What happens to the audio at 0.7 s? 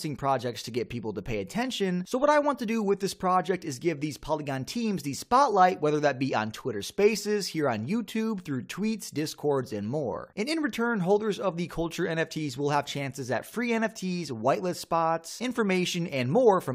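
Nothing goes wrong at 0.7 s; the audio plays through that moment intact, with no dropout, click or other fault.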